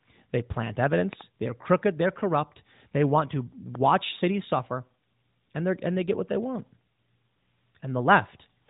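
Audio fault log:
1.13–1.23 s and 3.75–3.77 s, loud pop: a double pop, then a single pop after "want to", about 10 dB above the speech, likely from switch or static voltage pulses.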